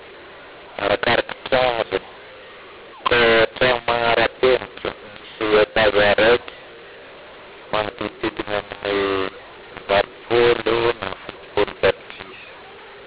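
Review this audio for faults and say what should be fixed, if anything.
Harsh, gritty distortion runs through the whole speech clip: loudness relationships are scrambled and pauses fill with noise instead of silence. This is mu-law and A-law mixed up. The audio was encoded as A-law but decoded as mu-law, so every 8-bit code lands on the wrong amplitude. Signal the companding law with the stream, or set both ends to the same G.711 variant (A-law here), so the decoder always matches the encoder.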